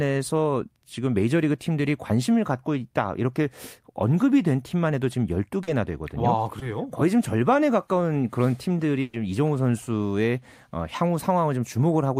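Packets arriving late or not at all interrupt this speech recording three times. Two are short concealed packet loss, at 5.63 to 5.69 s and 6.59 to 6.63 s. The decoder patched 40 ms and 20 ms of missing audio by extending the preceding sound, then blended back into the real signal, leaving a brief smear or wobble. At 9.01 to 9.15 s, a burst of packet loss forced 120 ms of concealment. The receiver carried the last sound forward and turned it down, giving a held buzz or fading hiss. The speech then resumes with 120 ms of it gone.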